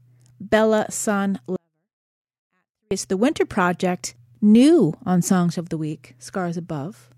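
From 1.56 s to 2.91 s the speech suddenly falls to near silence, about 48 dB down, yet what remains is clean, with no distortion or noise added, before full level returns at 2.91 s. This is a 24-bit alignment error (too quiet): 24-bit samples sitting in the low bytes of 32-bit words were read as full 32-bit integers, so every value lost its top eight bits of scale and the level collapsed.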